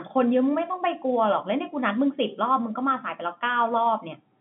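Nothing stood out on listening to this speech, which carries the narrow band of an ordinary telephone line.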